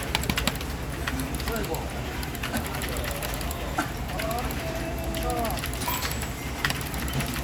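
Sounds, no audible faults.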